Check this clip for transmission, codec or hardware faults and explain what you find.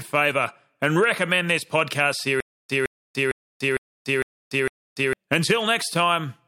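One fault, a stutter with silent gaps, runs from 2.40 s to 5.13 s, just after "and recommend this podcast". A 162 ms fragment of the speech repeats six times, each followed by about 292 ms of dead digital silence, so the burst returns every 455 ms in a steady mechanical rhythm. The likely cause is a stalled player or stream that replayed its last buffered fragment on each retry and then ran dry, losing the speech that belonged there.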